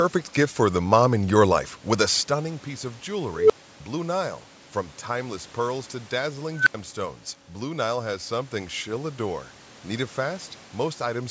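At 3.32 s, right after "a stunning piece of", an unstable filter blows up. A tone of around 400 Hz swells over about 177 ms, clips, then drops to about 304 ms of silence as the runaway recursion overflows and resets. At 6.56 s, after "timeless pearls to dazzling", it recurs as a higher squeal near 1.5 kHz, building over about 102 ms before an 80 ms dropout. Acoustic feedback builds more gradually and never ends in an abrupt silence.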